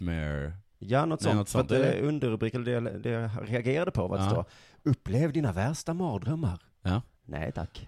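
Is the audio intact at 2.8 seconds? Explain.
Yes, the speech at 2.8 seconds plays through intact, with no dropout, click, distortion or other fault at that point.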